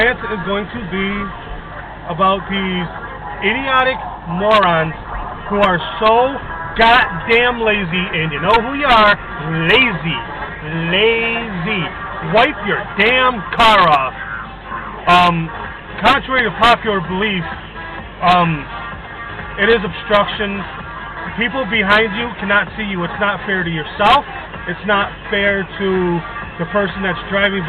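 Mains hum at 50 Hz runs through the whole clip. Power-line current leaks in, likely via a ground loop. It sits roughly 20 dB below the sound.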